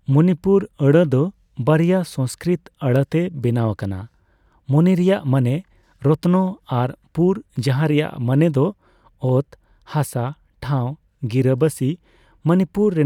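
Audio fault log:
Nothing faulty can be heard anywhere in the speech. The log has no entries for this recording.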